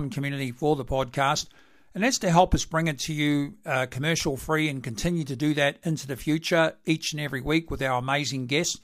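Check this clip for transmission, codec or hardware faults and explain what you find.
No faults found here.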